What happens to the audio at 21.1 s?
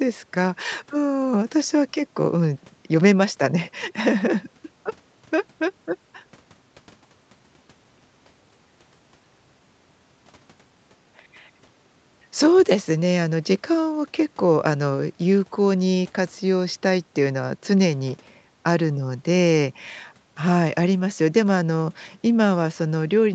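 At 21.1 s the speech is intact, with no dropout, glitch or other fault, only the normal band limit of the call path, which leaves nothing above 8 kHz.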